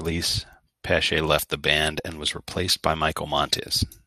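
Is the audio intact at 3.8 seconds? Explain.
No. At 3.8 s the speech sounds dull and gurgling, with a granular, flickering grit. The likely cause is MP2 compression at a low bitrate, around 80 kbps, where too few bits switch off upper sub-bands and coarsely quantise the rest. This is present throughout the clip.

The sound is also thin, bright and sibilant, with the treble about 8 dB too strong at 10 kHz. This is pre-emphasis left on: a CD-style 50/15 µs treble boost was never undone by its matching cut. It runs from 1.33 s to the end.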